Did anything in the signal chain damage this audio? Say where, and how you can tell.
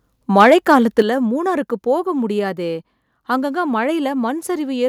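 Yes. Microphone overload runs from 0.36 to 1.01 s. The loudest syllables in that stretch have a harsh, crackly edge, and their peaks sound squared off rather than rounded. The peaks went roughly 4 dB past full scale, and around two percent of the samples are flattened at the ceiling. This happens at the converter stage: the input level was likely set too high, so the analogue-to-digital converter ran out of range and cut off the waveform tops.

The microphone volume stepped down at 1.02 s, immediately after that distorted passage. The speech and the background drop together by about 8 dB in a single abrupt step, with no gradual fade. Because everything falls at once, this points to the call-processing stage rather than anything acoustic. The call software likely detected the clipping and responded by lowering the device's input gain in one move, which is why the level change comes right after the harsh peaks.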